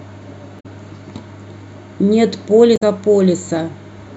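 A short blip cuts into the speech from 0.56 to 0.66 s, and a second, similar glitch follows from 2.73 to 2.82 s, each lasting under a tenth of a second. Both come from damaged data in a compressed stream: bytes in those stretches were corrupted, so the decoder misread or rejected the affected frames, lost its place in the bitstream and had to hunt for the next valid frame header before decoding resumed.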